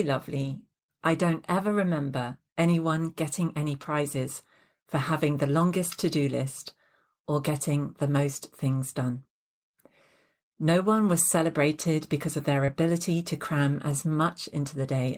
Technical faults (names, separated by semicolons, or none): lost packet rebuilt from error correction; short concealed packet loss